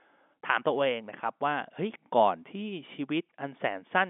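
No technical faults can be heard in this speech.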